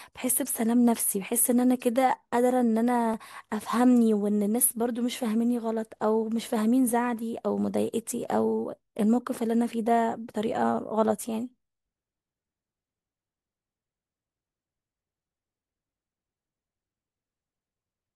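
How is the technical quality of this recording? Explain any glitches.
One glitch in the speech: a single sharp click at 3.14 s. Its likely cause is dropped samples. A fraction of a millisecond is missing from the stream, so the waveform jumps abruptly to a later value.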